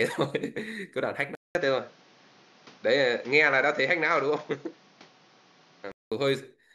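At 1.35 s the speech drops out for about 200 ms, then comes back duller, with nothing above 7 kHz and a new noise floor roughly 30 dB down, at much the same level. That's likely the input switched to a poorer device, lasting until 6.12 s.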